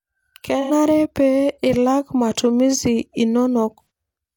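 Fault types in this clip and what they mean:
AAC frame loss with concealment: at 0.61–0.71 s and 3.82–3.90 s, 85 ms of coded audio goes missing each time, which fits two lost frames. The decoder fills each gap from the last good spectrum, giving a short smeared patch in the speech rather than silence.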